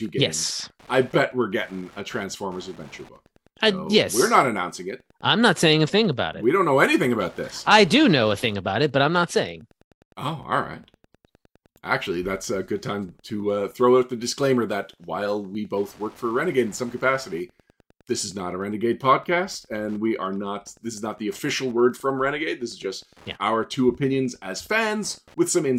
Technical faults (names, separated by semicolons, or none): Wi-Fi interference